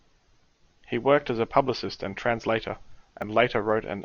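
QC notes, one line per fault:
3.22 s, dropped buffer (overrun): the speech skips ahead roughly 10 ms with no silent gap, unlike a dropout; likely samples overwritten before collection.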